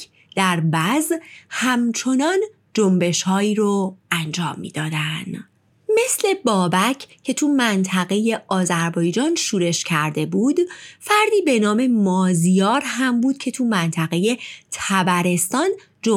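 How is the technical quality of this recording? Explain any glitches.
No technical glitches are audible anywhere in the recording.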